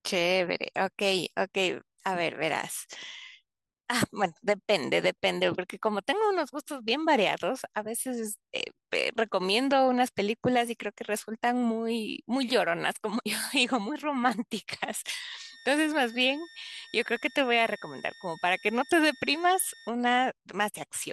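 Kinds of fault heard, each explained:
Switching supply whistle: a power supply's switching runs at an audible rate, leaking a faint high whistle from 15.38 to 19.9 s, wavering between 1.81 and 1.84 kHz, roughly 25 dB under the speech. On a spectrogram it's a thin horizontal line; the waveform barely shows it.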